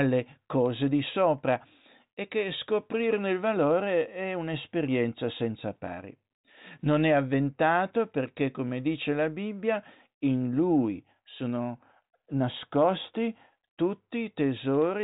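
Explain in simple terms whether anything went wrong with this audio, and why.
Nothing went wrong: the speech passed through a G.726 ADPCM telephone link, which drops everything above 3.8 kHz and so gives the narrow phone-line sound, and its coding noise is faint at most.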